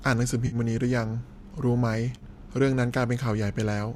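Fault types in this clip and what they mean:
AAC frame loss with concealment: brief smeared, noisy patches, 50 ms at 0.47 s and 30 ms at 2.18 s. Audio frames went missing, and the decoder filled each gap by reusing the last good spectrum, likely within a low-delay AAC stream using 10 ms frames.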